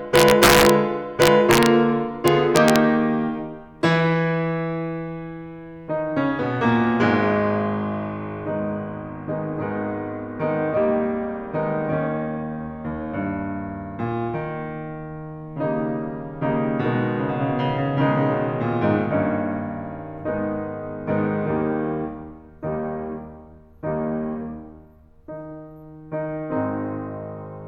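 Violent cracks tear through the loudest moments of the music at 0.16–0.70 s, 1.22–1.66 s and 2.28–2.76 s, far harsher than clipping. This is integer overflow: with the level driven about 4 dB, 2 dB and 0 dB over full scale, peaks wrapped to the opposite sign instead of being limited.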